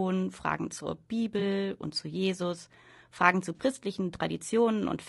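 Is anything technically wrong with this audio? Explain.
Yes. The speech sounds rough and grainy throughout, with noise filling the gaps between harmonics and a thin, synthetic-sounding top band. That points to low-delay AAC compression, likely AAC-ELD at a low rate around 32 kbps, whose short frames resolve pitch harmonics poorly. On a spectrogram, harmonics look smeared and the upper band looks patchy.

There is AAC frame loss with concealment at 1.39–1.42 s and 3.56–3.61 s, about 20 ms and 40 ms of missing audio. The decoder rebuilt each gap from the preceding spectrum, so each one sounds like a brief smeared, noisy blip, the second slightly longer. The waveform shows a short irregular patch, and the spectrogram shows a blurred vertical smudge.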